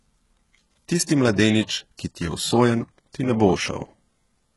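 HE-AAC compression, heard across the whole clip, is the likely cause of the gritty, artificial treble in this speech. Nothing comes through above 11.5 kHz, and the upper band sounds rebuilt rather than captured: energy from lower frequencies appears copied upward under a coarse envelope, so its harmonics fail to line up with the speech below. The damage is heavy, making s sounds gritty and metallic, which fits a very low bitrate of around 12 kbps.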